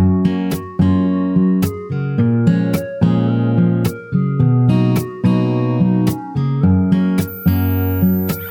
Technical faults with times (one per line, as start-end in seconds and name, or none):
7.27-8.50 switching supply whistle